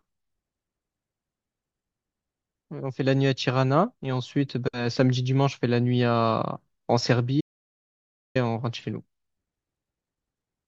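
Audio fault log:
7.41 to 8.35 s, audio dropout to silence: the speech just stops dead and comes back mid-flow after roughly 0.95 s. The gap is silent, with no room tone or hiss underneath, which is what you get when the recorder keeps writing silence after the input goes away. That most likely points to a momentary disconnect, a link failure or a stray mute upstream. Whatever was said in that stretch is simply gone.
8.80 to 8.83 s, corrupt frame decoded: just after the speech returns there's a short chirpy burst, about 30 ms long, that doesn't belong to the speech at all. It sounds like a couple of compressed frames were damaged and the decoder played them anyway. Misread gains and codes scatter energy into the wrong frequencies, so you hear a brief squeak or noise blip that lasts about as long as the bad frames.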